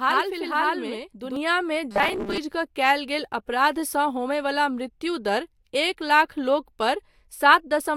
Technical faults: channel delay (doubling); robotic sound from repeated short buffers

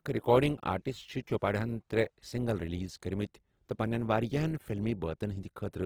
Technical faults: Opus compression

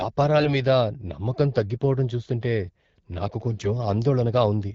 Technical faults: AMR bit errors

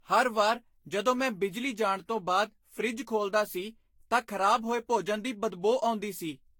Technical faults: generation loss

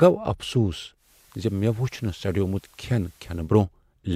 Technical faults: digital radio blending to analogue

